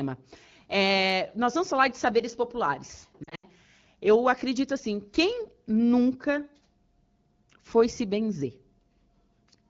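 From 3.24 to 3.47 s, after "falar de saberes populares", lost AMR speech frames force the decoder to extend fading guesses, so speech warbles and drops out briefly, up to 80 ms.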